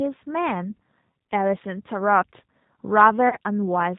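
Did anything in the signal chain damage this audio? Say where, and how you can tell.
Yes. At the codec stage, the whole speech clip carries G.729 coding damage. Nothing passes above 4 kHz, and the voice has a rough, synthetic grain, which fits 8 kbit/s G.729A. A plain low-pass filter would dull the sound but leave it smooth. This sound is rebuilt from a filter model and sparse pulses.

At the network stage, VoIP packet loss concealed by the speech codec occurs from 3.29 to 3.37 s. About 30 ms of audio, consistent with a single lost packet, is replaced by a buzzy or noisy, fading extension of the previous sound. The voice then stays weakened or distorted briefly. A raw dropout would leave silence or a click instead.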